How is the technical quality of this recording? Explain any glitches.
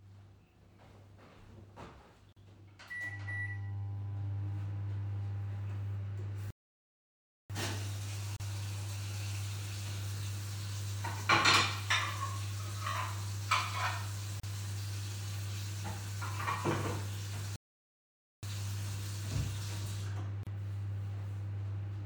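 The recording has two kinds of glitch, both silences. Gaps at a join of encoded pieces fall at 2.33, 8.36, 14.40 and 20.43 s, every 6 s. Each lasts 34 to 39 ms. Separately encoded chunks were joined untrimmed, leaving encoder delay and padding as dropouts with smeared edges. Playback stalls occur at 6.50 to 7.50 s and 17.56 to 18.43 s, lasting about 0.99 s and 0.87 s. The sound halts mid-flow, then resumes. The player likely ran out of data.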